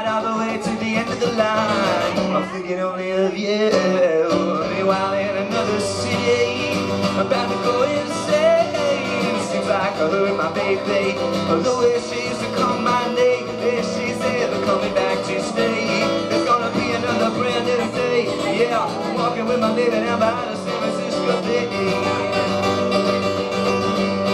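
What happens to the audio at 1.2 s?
Nothing goes wrong at 1.2 s; the audio plays through that moment intact, with no dropout, click or distortion.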